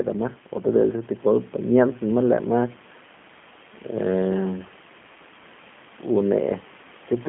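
A speech recording carrying G.729 codec damage throughout, plainly audible as a rough, slightly synthetic, buzzy quality, with the band limited to a telephone line of roughly 150 Hz to 3.4 kHz. On a spectrogram the energy stops sharply at about 3.5 kHz with nothing above, and harmonics look smeared in 10 ms steps. The coarse rebuilding of each frame from a filter, a pitch predictor and a few pulses fits an 8 kbit/s G.729A stream, and it makes the room noise, about 22 dB below the speech, warble.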